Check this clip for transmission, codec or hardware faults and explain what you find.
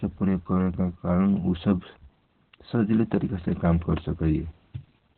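The clip has one codec fault: Opus voice compression, running from start to finish. Nothing is heard above about 4.5 kHz, so the speech is confined to a narrow telephone-like band. At this low rate Opus relies on its SILK linear-prediction coder alone and codes the excitation coarsely, which fits a bitrate of about 8 kbps. The damage is heavy. The speech sounds muffled and hoarse, with a slightly robotic edge.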